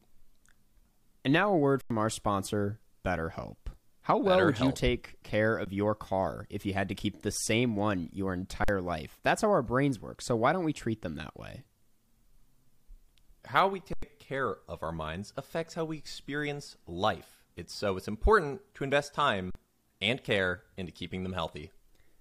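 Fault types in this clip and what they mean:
Underrun with held sample: the output buffer emptied five times, so the speech freezes flat for 14 to 93 ms, then jumps ahead.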